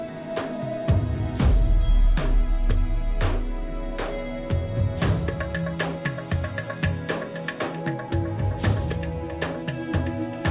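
No technical fault can be heard anywhere in the audio.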